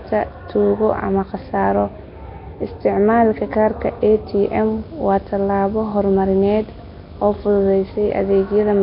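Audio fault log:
Throughout: Nellymoser compression, likely. The speech sounds hissy, rough and underwater, with nothing above 5.3 kHz. Starved bands are refilled with noise.
4.39 to 8.51 s: video or display buzz. A 50 Hz field-rate buzz with hash appears, plus a 15.6 kHz line tone, roughly 20 dB below the speech.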